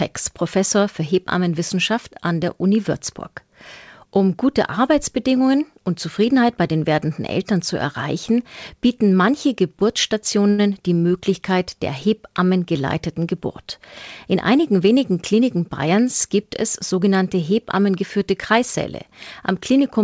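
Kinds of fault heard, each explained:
Short stall from a late packet: At 10.50 s a packet failed to arrive on time, the jitter buffer ran dry, and the receiver held the last sound for about 83 ms until the packet came and playback resumed where it had stopped. Nothing is skipped, so it sounds like a brief drawn-out syllable with a slight buzz or dip, not a dropout or gap. The added 83 ms of delay carries forward afterward.
Jitter buffer speed-up: From 14.26 to 15.87 s, just before "gibt es sogenannte hebammengeführte", the receiver had more audio buffered than its target and trimmed pitch-period-sized slices repeatedly, removing roughly a tenth of a second. The speech runs at about 105% speed with unchanged pitch, sounding slightly hurried. This differs from a tape-style speed-up, which would raise the pitch, and from a stall, which stretches time instead of compressing it.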